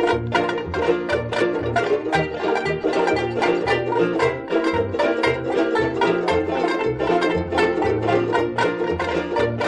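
No technical faults are audible in this music.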